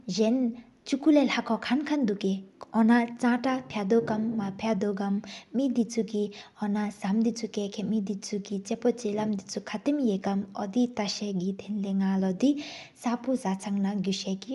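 Throughout the speech, the top end sounds breathy and grainy, and nothing remains above 11.6 kHz. This is likely Bluetooth LC3 compression, which zeroes upper bands and refills them with noise. That makes the top hissy rather than simply dull, as a plain low-pass would, and fits about 48 kbps.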